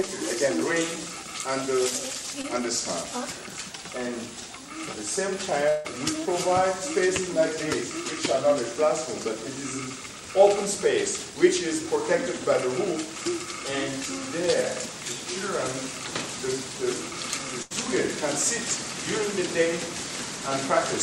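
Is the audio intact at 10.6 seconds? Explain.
Yes, the audio is intact at 10.6 seconds, with no dropout, click, distortion or other fault heard at that point.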